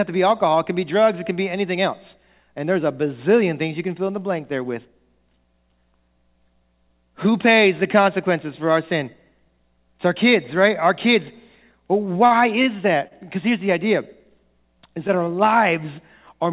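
A speech recording carried over a call path band-limited to nothing above 4 kHz, which points to a narrowband G.711-style codec, with two timing faults close together. From 12.06 to 12.68 s the speech stutters and drags in four brief hitches, each a held or smeared continuation of the sound just before it. The longest lasts about 50 ms, and together they fill about 96 ms, some 16% of that stretch. These are repeated stalls (stutter): packets kept reaching the receiver late, so its jitter buffer drained four times. Each time, the receiver extended the last sound until fresh audio arrived, so nothing is lost but the rhythm is disrupted. Around 13.08 to 13.24 s a single sound is held too long, with a faint buzzy or slightly dipped quality for about 33 ms. This is a short stall from a late packet: one packet arrived roughly 33 ms behind schedule, the buffer ran dry, and the receiver stretched the preceding sound before resuming exactly where it left off.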